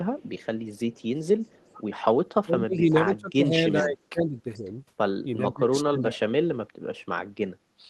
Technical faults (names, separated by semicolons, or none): echo leak; speech suppressed in double talk